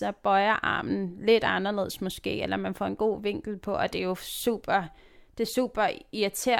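No technical faults can be heard anywhere in the speech.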